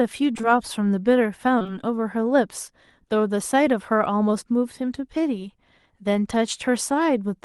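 In this speech clip, two brief smeared, wobbly patches occur, near 0.33 to 0.45 s and 1.59 to 1.70 s. Each is short concealed packet loss, three back-to-back gaps of about 20 ms starting at 0.33, 0.37, 0.41, 1.59, 1.62 and 1.67 s. The audio didn't arrive in time, so the receiver extended the preceding sound before blending back into real audio, which is why sound there blurs.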